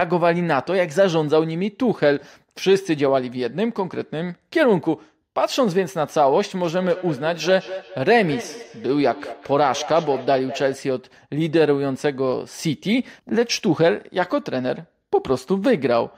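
From 6.63 s to 10.9 s there's feedback echo between two devices. Each bit of speech comes back about a fifth of a second later, a little thinner and with a ringing edge, at its loudest about 14 dB under the direct speech. What's going on is two devices in the same room on one call: one plays out what the other's mic sent, and that mic picks it up again. Each echo canceller only cleans up its own device's playback, so the repeat gets through.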